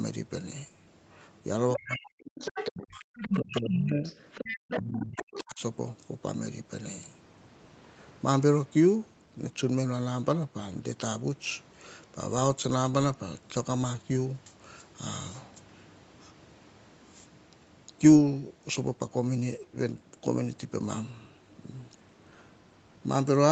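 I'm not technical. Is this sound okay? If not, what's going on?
No. Between about 1.74 and 5.4 seconds, a second, fainter voice slips in underneath, at 1.74 to 1.97, 2.37 to 2.71, 3.15 to 3.77 (where it is loudest), 4.04 to 4.8, and 5.16 to 5.4 seconds. This is the other side's voice leaking through, likely because the far end's loudspeaker sound reached the microphone and the echo canceller didn't fully remove it.

The main speech also sinks sharply or drops out in patches from 1.77 to 2.37, 2.7 to 4.04, and 4.78 to 5.6 seconds. This is speech suppressed in double talk. Both sides were likely talking at once, so the echo canceller couldn't separate them and turned everything down.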